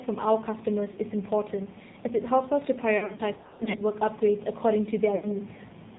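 Throughout, the speech carries AMR narrowband mobile codec damage. Everything above 4 kHz is missing, and the voice has the buzzy, synthetic edge of a low-rate mode, consistent with about 7.4 kbps. Pulse-driven vocal-tract modelling replaces natural detail.

Lost AMR speech frames occur at 0.92–0.98 s, a brief warble of about 40 ms. From 2.98 to 3.82 s, about 360 ms of dropouts are scattered over 800 ms, with runs up to 60 ms, giving repeated smeared, fading patches. At 5.16–5.36 s, about 80 ms is concealed with falling gain.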